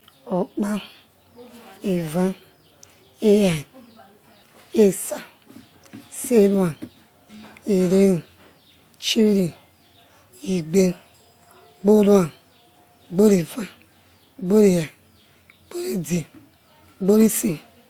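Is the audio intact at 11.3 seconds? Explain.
No. At 11.3 s, as throughout the speech, the audio likely went through transcoding between lossy codecs, a WMA encode re-encoded as Opus. Both codecs' artefacts are audible together, and nothing sounds above 20.2 kHz.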